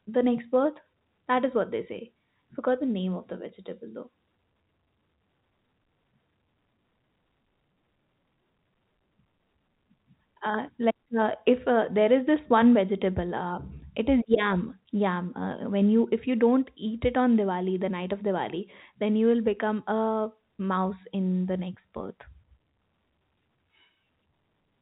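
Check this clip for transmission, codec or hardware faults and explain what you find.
No transmission, codec or hardware faults found; the speech carries the expected G.711 telephone band, with nothing above 4 kHz, consistent with an ordinary 64 kbps A-law line.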